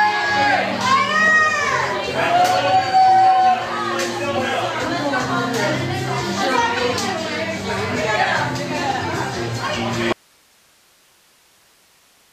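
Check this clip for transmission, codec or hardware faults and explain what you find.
One fault is present. At 10.12 s the audio drops out to a faint residue and stays that way to the end. The signal cuts off abruptly. Only hiss remains, roughly 35 dB down. The likely cause is a lost feed into a still-live path.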